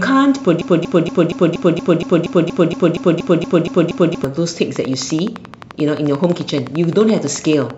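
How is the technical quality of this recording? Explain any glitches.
Not great: two clear glitches, one after the other.

From 0.61 to 4.24 s there's a broken-record loop. A 0.24 s chunk plays back to back 15 times, so the speech sticks and stutters. Likely the player or stream stalled and kept resending its last fragment, and the audio meant for that stretch is lost.

From 4.76 to 7.71 s comes a train of clicks: around forty near-identical ticks at a steady 11.6 per second, poking out above the speech and through the pauses too. Likely interference from nearby gear or a faulty connection or power supply.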